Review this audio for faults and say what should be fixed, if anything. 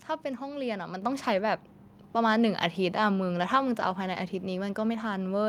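Microphone volume stepped up at 1.02 s: the speech and the background around it jump together by about 6 dB in a single step, with no gradual ramp. The call software judged the input too quiet and raised the microphone's device-level input volume in one move, so everything the capsule picks up, room noise included, becomes louder at once.

To prevent it, turn off the call software's automatic microphone level adjustment and set a fixed input level high enough that it never triggers.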